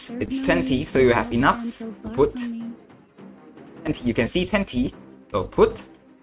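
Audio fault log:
Nothing to log here; I listened all the way and didn't catch a single problem anywhere in the audio.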